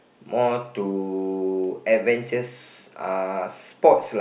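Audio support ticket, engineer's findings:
Listened through the speech clip and found nothing to flag, so no faults to report on this one.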